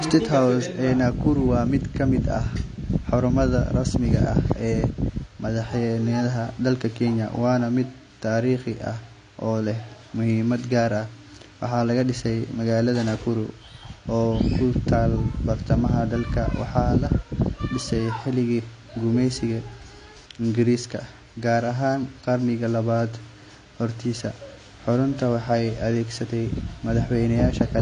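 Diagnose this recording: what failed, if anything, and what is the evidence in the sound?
The failure is at the codec stage and lasts the whole speech clip. Nothing sounds above 9.7 kHz. The damage is plainly audible: dull, smeared highs and fizzy, warbling sibilants. The likely cause is AAC compression, AAC-LC at a rate that fits roughly 32 kbps, which starves the upper bands.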